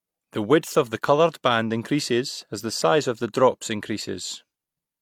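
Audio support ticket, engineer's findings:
No audible faults found on review; no action needed.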